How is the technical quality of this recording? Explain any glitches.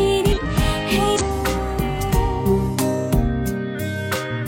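Two short glitches break into the audio. From 0.33 to 0.39 s and again from 1.16 to 1.22 s there are brief breaks in the sound. They come from damaged data in a compressed stream: corrupted bytes made the decoder misread frames and lose sync until it found the next frame header.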